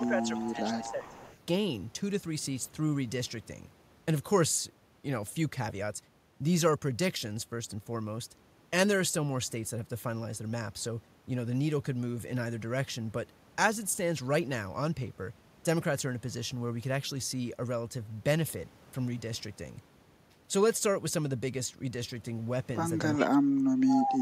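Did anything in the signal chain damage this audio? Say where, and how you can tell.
Yes. Speech suppressed in double talk appears at 0.0 to 1.3 s and 23.19 to 24.2 s, about a second each. The voice sinks by about 10 dB, then about 25 dB. This is likely call processing: the echo canceller, facing simultaneous talkers, turned down the wanted speech.

Echo leak runs from 0.06 to 1.38 s and from 23.88 to 24.21 s: a copy of the voice trailing by 394 ms, about 15 dB below the speech at first and about 5 dB below at the end. It likely comes from the far end's loudspeaker echo escaping cancellation and returning.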